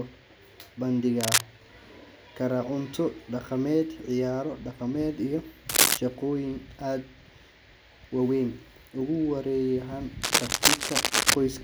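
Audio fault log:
1.21–1.41 s, 5.69–5.98 s, 10.22–11.35 s: cable scratch noise. Bursts of dense, ragged crackle sit on top of the speech, standing a few decibels above it, with the last burst running over a second. The scratching is likely caused by a worn cable, plug or control being moved, its contact resistance jumping rapidly so irregular noise is added to the signal.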